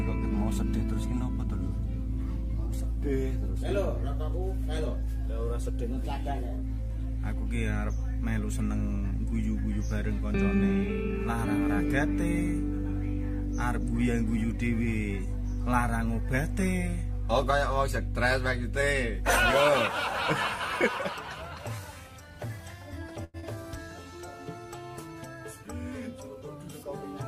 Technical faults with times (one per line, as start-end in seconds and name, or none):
23.24-23.37 short stall from a late packet
23.40-23.45 short concealed packet loss